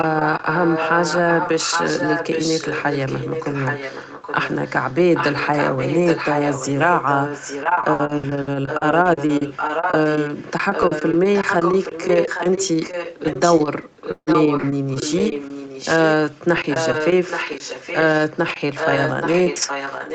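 A speech recording carried over an Opus call, band-limited to 8 kHz, with three kinds of fault. The first is an echo leak, likely because the far end's echo canceller let its loudspeaker pickup through and sent it back. From 0 to 4.95 s and again from 5.14 to 10.51 s, a copy of the speech trails the original by about 0.82 s at nearly the same loudness, only about 5 dB down, so the two overlap audibly. Brief, much fainter scraps of the same delayed echo return at 16.35 s and from 18.27 to 18.39 s. At 14.11 to 14.30 s there is a long network dropout, likely a run of packets that never arrived. The decoder stretches the last sound into a fading fill for about 150 ms, then leaves about 60 ms of silence. Roughly 120 ms of the original audio is simply gone when the sound resumes, and the playout timing shifts by a few tens of milliseconds. Close by, at 14.27, 14.57 and 15.18 s, there are lost packets rebuilt from error correction. 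Each 60 ms packet was recovered from the low-bitrate copy carried in the next packet, so no gap opens. Those short stretches do sound grainier and noisier than the audio around them.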